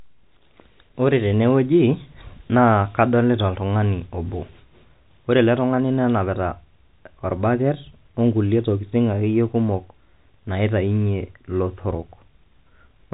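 Nothing goes wrong anywhere in this speech recording, which simply carries the narrow band of G.711 telephone coding, with its sound topping out around 3.8 kHz as a phone line's would.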